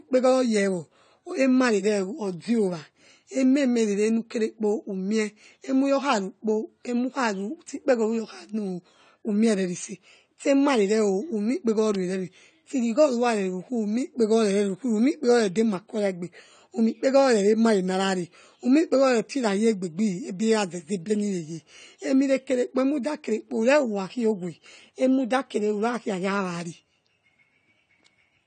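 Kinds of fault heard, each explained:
AAC compression: The speech has a hard ceiling at 9 kHz with nothing above it, and the damage is plainly audible as a dull, smeared sound with a warbling, fizzy texture on sibilants and held vowels. This is likely lossy AAC-LC coding at a bitrate around 32 kbps, where the encoder quantises bands too coarsely. A simple low-pass filter would dull the top without adding this watery, shifting grain below the cut-off.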